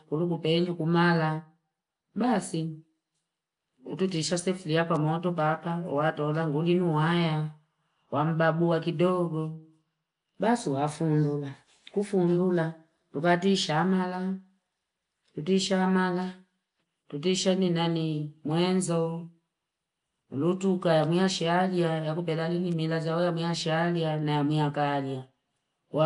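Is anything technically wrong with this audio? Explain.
Yes. Throughout, the speech has a rough, hissy halo and smeared, underwater quality with nothing above 10.6 kHz, likely Nellymoser compression, whose coarse bit allocation fills weak bands with noise.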